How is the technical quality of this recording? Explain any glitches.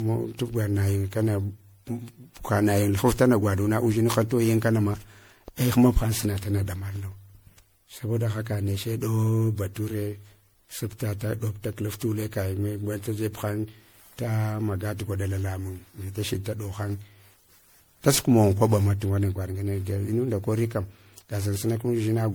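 The technical quality is compromised by generation loss, which runs through the whole speech clip. The sound is swirly, smeared and hollow, and consonant attacks blur. That is worse than one MP3 encode at what sounds like 96 kbit/s would produce, so the likely cause is around seven lossy re-encodes. Each pass quantises on a shifted frame grid, so noise and spectral holes accumulate. Nothing is present above 20.8 kHz.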